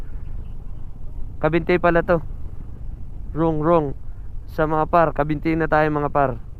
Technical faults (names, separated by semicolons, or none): none